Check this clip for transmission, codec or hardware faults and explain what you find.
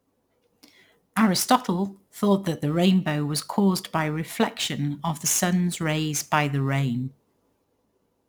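One fault runs through the whole clip: crude rate conversion. The speech was resampled by simply picking the nearest sample, a ratio that points to 48 kHz converted to 44.1 kHz, with no filtering. The repeating pick pattern adds inharmonic fizz, roughly 20 dB below the speech, that tracks loud and sibilant sounds. A spectrogram shows faint mirrored, unrelated tones beside the harmonics; a zoomed waveform shows small regular steps.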